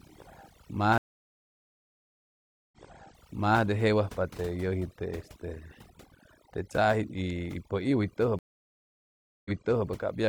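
A speech recording carries overdone noise removal from start to finish. The suppressor was pushed hard enough that every frequency band near its noise estimate gets cut almost to nothing, taking the softer parts of the voice with it. The result is a background of near silence dotted with twinkling specks. On a spectrogram the gaps between phrases look almost black, sprinkled with isolated bright dots, and the voice harmonics appear ragged and patchy rather than continuous. There are also two stream reconnects. In the first, from 0.98 to 3.61 s, the audio drops out for about 1.74 s. When it resumes, a fresh decoder picks up the stream 0.88 s earlier than where it broke, so that stretch of speech is heard again. The second, from 8.39 to 9.87 s, is a 1.06 s dropout, after which playback restarts 0.42 s back and repeats that portion. On a waveform each one shows as a flat, dead-silent block, and the following audio repeats the shape of the section just before the gap.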